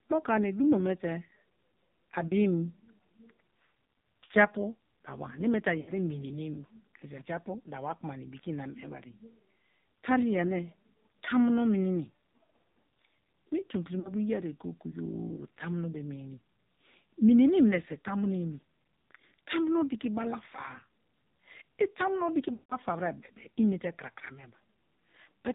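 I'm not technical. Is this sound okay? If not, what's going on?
No. The speech went through the AMR narrowband mobile codec, an old phone-network system that discards everything above 4 kHz and rebuilds the voice from a rough model. Here it ran at a low-quality setting, so the voice sounds muffled, buzzy and synthetic throughout.

There are also lost AMR speech frames: radio errors corrupted short chunks, and the phone filled each gap by repeating the last good sound while fading it. You hear a brief warble at 2.28–2.32 seconds, short drawn-out, fading sound at 5.80–5.91 and 14.00–14.12 seconds, and a longer smeared fade toward silence at 22.54–22.75 seconds.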